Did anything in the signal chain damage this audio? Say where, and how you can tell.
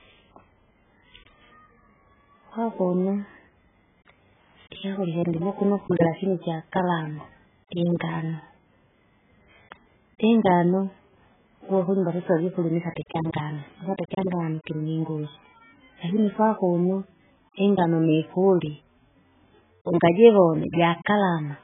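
Yes. At the codec stage, likely AAC compression starved near 8 kbps: throughout, nothing reaches above 3.8 kHz, and the coarse quantisation leaves the speech dull, smeared and warbling.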